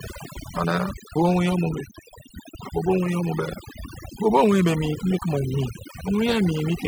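Overdone noise removal runs through the whole speech clip. A noise reduction stage was pushed far too hard on a noisy source. It cuts individual frequency bands deep, or shuts them off, whenever they sit close to its noise estimate. Quieter parts of the voice fall below that line and vanish too. Between phrases the background drops away and breaks up into twinkling specks.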